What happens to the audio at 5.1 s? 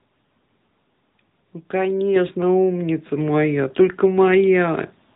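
At 5.1 s the speech is still passing through the AMR narrowband mobile codec, which colours the whole clip from start to end. The codec rebuilds the voice from a vocal-tract model excited by a few pulses in each 5 ms, so it sounds buzzy and synthetic, with plainly audible damage that points to a mid-range bitrate of around 10 kbps. On a spectrogram, all energy stops at a flat ceiling near 3.8 kHz.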